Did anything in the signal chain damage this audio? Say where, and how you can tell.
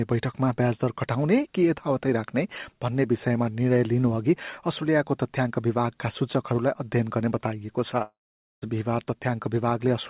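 Yes: a long network dropout from 8.02 to 8.64 s, likely packet loss. Concealment stretches the last sound into a fading buzz, then about 0.46 s of near-silence, and the lost audio never returns. A spectrogram shows a smeared tail, then an empty gap; the waveform flattens.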